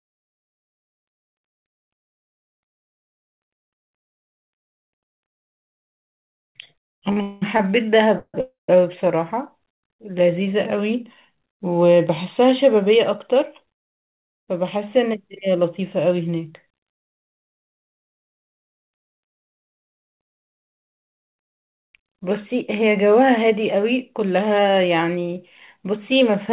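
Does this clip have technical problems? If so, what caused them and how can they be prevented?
Yes. The speech clip has three kinds of timing fault. It comes through a call path whose audio stops at 4 kHz, which fits a narrowband G.711 codec.

Repeated stalls (stutter) occur between 7.11 and 7.60 s. Four times the jitter buffer ran dry and the receiver stretched the last sound. The longest gap is 200 ms, and about half of that span is filled this way. On a spectrogram, smeared, repeated harmonic stripes break up the speech. Giving the jitter buffer a larger minimum delay prevents these stalls.

Call audio freezes occur at 8.17 to 8.35 s and 8.41 to 8.69 s. The sound holds and fades, then goes silent for 60 ms and 150 ms, and afterwards the speech resumes late. The likely cause is packets held up in the network. On the waveform each freeze shows a decaying tail followed by a flat line. Network prioritisation (QoS) for voice packets would prevent these freezes.

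Jitter buffer speed-up runs from 12.86 to 22.53 s at 104% speed, and from 24.14 to 26.50 s at 107%. Short pitch-period pieces, around 0.6 s in total, were cut to drain excess delay. The pitch stays the same but the pace sounds hurried at 107%. A spectrogram shows syllables packed slightly closer in time. Smaller delay spikes, or slower and more gradual buffer adaptation, would prevent this.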